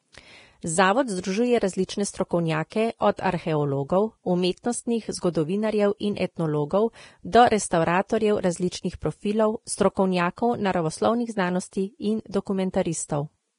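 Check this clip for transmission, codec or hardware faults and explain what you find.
One fault runs through the whole clip: heavy lossy coding, likely Vorbis compression at a low bitrate around 30 kbps. The encoder discards everything above 10.6 kHz and quantises the remaining treble so coarsely that detail turns to noise, leaving the speech hissy and grainy, with roughened tones and smeared consonant attacks.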